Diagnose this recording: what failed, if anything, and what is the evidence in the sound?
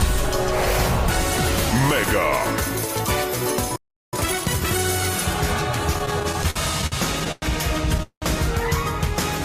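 Playback stage: the player likely starved or blocked, causing a playback stall. The sound stops dead from 3.76 to 4.13 s, a silence of about 0.37 s.

Playback buffer: to recover lost time, time-compressed catch-up trims and cross-fades small pieces. From 4.13 to 4.85 s the sound runs 1.5 times fast at normal pitch.

Network and jitter buffer: packets arrived late repeatedly, producing repeated stalls (stutter). Between 5.93 and 7.44 s, 14 gaps are filled with continued sound, the longest 104 ms, about 22% of that span. Nothing is lost, but it drags.

Network: a delayed packet burst likely emptied the jitter buffer, a call audio freeze. At 8.03 to 8.24 s, 192 ms is filled, the last 100 ms silent, then the sound resumes intact.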